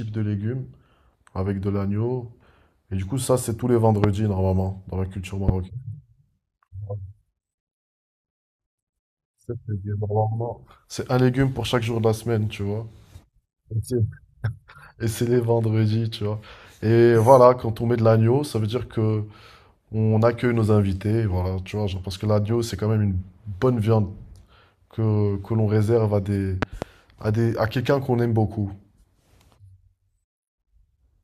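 A sharp, loud pop cuts across the speech at 4.04 to 4.06 s, standing roughly 20 dB above the signal, and a second, softer one follows at 5.49 to 5.51 s. At 26.62 to 26.85 s a double pop arrives in quick succession, peaking about 15 dB up. The speech continues underneath each time. This is the loud pop fault, likely a brief voltage spike from a connector, switch or static discharge entering the chain.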